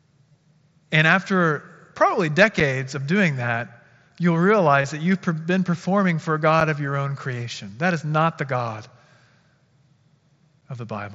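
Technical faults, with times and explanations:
0.33 s and 4.82 to 4.84 s, concealed Bluetooth headset packet loss: about 15 ms and 22.5 ms of audio went missing between headset and phone, which points to two and three lost frames. The receiver filled each hole by repeating the best-matching recent stretch of the waveform, so the speech briefly turns into a short buzzy, tonal sustain at full level. A small warble follows as real audio resumes. The second event sits between "of doing that you'll" and "that you've been performing".
2.60 s, 6.61 s and 10.61 s, gap between chunks: each is a silent hole of about 6.5 ms with hard edges, recurring at a steady 4.0 s spacing. That regularity matches audio delivered in 4-second chunks, with padding or a late chunk start leaving dead air at each join. No speech is removed, but the flow is cut. The first falls just before "of doing that you'll", the second between "been performing for a" and "of your own creation".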